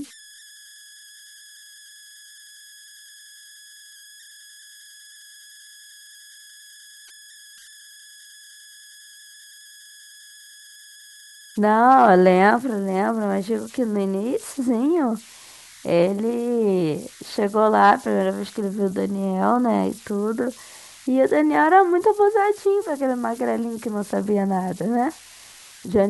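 Throughout the speech, a whistle sits in the pauses at around 1.5 kHz, and quiet passages carry a grainy, chirping texture beneath them, roughly 26 dB below the level of the speech. These are converter idle tones: with no dither, a delta-sigma converter handling a very small input locks into repeating bit patterns, and those cycles emerge as audible tones whose pitch follows the input's small offset rather than the sound itself.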